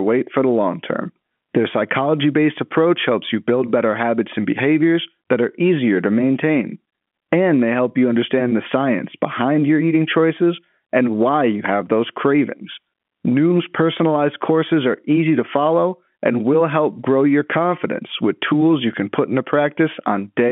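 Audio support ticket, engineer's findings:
No faults found; telephone-band speech, nothing to fix.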